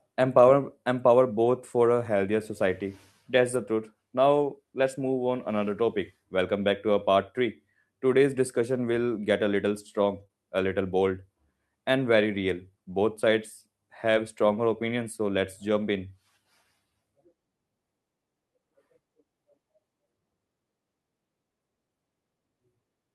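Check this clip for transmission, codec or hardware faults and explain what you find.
Yes, network packet loss damaged this speech in two ways.

Lost packet rebuilt from error correction, at 1.41–1.51 s, 3.53–3.55 s and 10.19–10.21 s: lost packets were replaced with low-bitrate copies from the following packets, so there is no gap. Those stretches sound rougher and noisier. The first runs 60 ms, which fits three consecutive 20 ms packets.

Short concealed packet loss, at 10.23–10.27 s and 10.27–10.31 s: two back-to-back 20 ms chunks arrived too late. The decoder extended the preceding sound to fill them, leaving a brief smear or wobble right after the 10.2 s repair.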